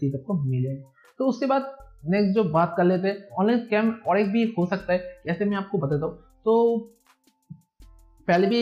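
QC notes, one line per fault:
No audible faults found.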